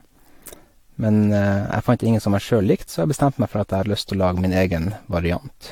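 From start to finish, the speech sounds swirly and hollow, with smeared consonant attacks and nothing above 19.4 kHz. This is likely generation loss. The audio seems to have been decoded and re-encoded about five times with a lossy codec, in a way that fits AAC-LC at 96 kbit/s. Each pass quantised the signal again on a shifted frame grid. Noise built up, leaving more murk than one encode at that rate would.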